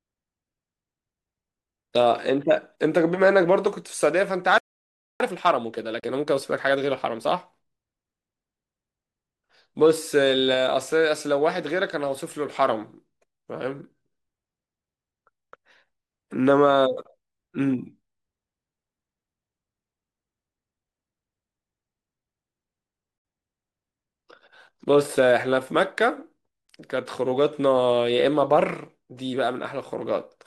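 Speech recording with a playback stall from 4.58 to 5.20 s: the sound halts for about 0.62 s, likely because the player ran out of buffered data. Time-compressed catch-up follows from 5.20 to 7.68 s, with speech hurried to 1.25x at normal pitch as small segments are cut and cross-faded. Two digital broadcast dropouts mute the sound with fast fades, at 5.996 to 6.035 s and 23.18 to 23.25 s, consistent with one and then two corrupted frames, so that audio is lost.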